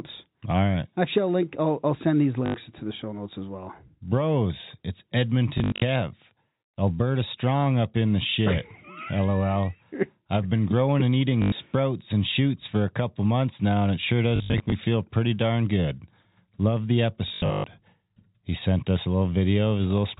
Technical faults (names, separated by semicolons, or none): packet loss with last packet repeated